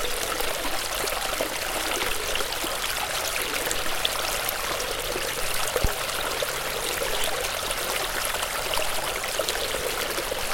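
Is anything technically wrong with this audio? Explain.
Yes. A block size mismatch, truncated type, runs through the whole clip. One processing stage hands over longer blocks than the following stage reads, and the surplus at the end of each block is discarded. The periodic cut produces a buzz at about 46.9 Hz, which fits a 1024-sample read. Because material is dropped each cycle, the sound plays 1.12 times faster than it should, while its overall timbre is preserved.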